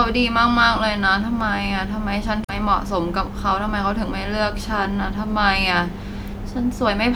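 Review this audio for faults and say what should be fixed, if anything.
A short glitch cuts across the speech from about 2.42 to 2.50 s, a burst of roughly 80 ms before the voice resumes. This is damaged data in a compressed stream: data in that stretch of the file was lost or overwritten, so the decoder could not read those frames correctly, lost its place, and searched until it found the next valid frame header and resynchronised. To prevent it, verify file integrity with checksums during transfer and storage, and re-fetch or re-encode from an intact source when a check fails.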